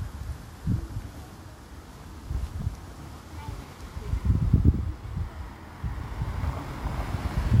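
From 1.37 s to the end, crude rate conversion sets in. Samples appear repeated, not filtered, which fits a step from 32 kHz to 48 kHz. The repeating error adds inharmonic tones, roughly 35 dB down, heard as a gritty fizz under loud and bright sounds.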